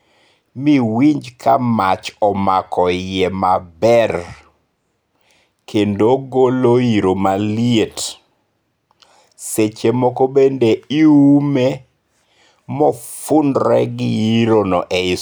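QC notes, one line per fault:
No faults heard anywhere in this speech recording.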